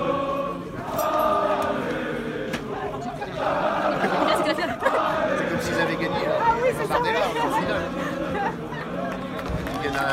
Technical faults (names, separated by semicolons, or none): time-stretched section